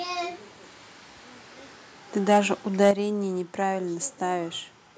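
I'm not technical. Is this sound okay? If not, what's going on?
No. Two things go wrong. Between 2.31 and 2.38 seconds and again between 2.82 and 2.91 seconds, the loudest moments of speech turn harsh and crackly. That is microphone overload: the input was likely set too high, so the tops of those peaks get cut off.

Right at 2.91 seconds, just after the second crackly peak, everything suddenly gets noticeably quieter in one step. That is the microphone volume being stepped down: the calling software likely heard the overload and cut the input level to stop it.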